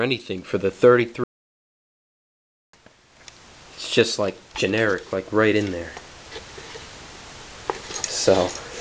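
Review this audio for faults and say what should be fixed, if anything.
There's one problem worth fixing: a playback stall from 1.24 s to 2.73 s. The audio just cuts out mid-flow and stays silent for about 1.5 seconds before picking back up. A gap that long isn't a dropout or a tiny glitch. It's most likely the player running dry of buffered data, or its audio thread getting blocked, so nothing reached the output until it caught up. Giving the player a deeper buffer and keeping the audio thread free of blocking work should stop it happening.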